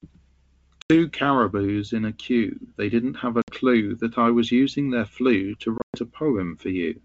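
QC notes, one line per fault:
0.82–0.91 s, 3.42–3.53 s, 5.78–5.97 s: packet loss on an ADPCM call. About 80, 60 and 140 ms of speech drop to hard-edged silence, the last spread over 160 ms, longest 120 ms. The decoder's predictor and step size lose sync, so speech returns slightly distorted before settling.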